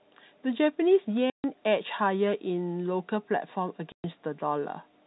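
At 1.30 s the speech drops out for 140 ms, until 1.44 s. At 3.92 s it drops out again, for 120 ms, until 4.04 s. Both are packet loss filled with silence. Packets never arrived, and the receiver played nothing in their place. Both gaps divide evenly into 20 ms steps, which fits 20 ms packets. The edges are abrupt. The narrow telephone band of the G.711 coding carries on either side of both holes.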